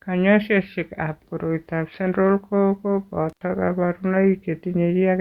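At 3.29 s the speech breaks up with an intermittent contact fault lasting until 3.41 s. A loose plug or cable connection momentarily loses continuity, so the signal path goes open for roughly 87 ms inside that window. The audio drops out abruptly rather than fading, and the make and break of the contact leaves short crackles at both edges of the gap, with faint hiss remaining while the line is open.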